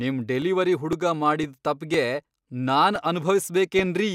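The speech was handled in half-second chunks, and each new chunk began about 7 ms before the previous one had finished, so those few milliseconds are played twice at every join. These overlapping chunks appear at 0.42, 0.93, 1.44, 1.94, 2.45, 2.96 and 3.46 s. Each sounds like a small click or a brief stutter, and their steady spacing of roughly half a second gives the speech a regular tick.

DAB burbling occurs from 3.79 to 3.83 s. Weak reception let bit errors, at a rate of around 0.2 percent, get past the error correction into the MP2 audio data. Corrupted samples put short blips of noise in single sub-bands, and corrupted scale factors make sub-bands jump in level for up to a frame, and the spread of the damage suggests about five frames were affected. The result is a short burst of blips laid over the speech.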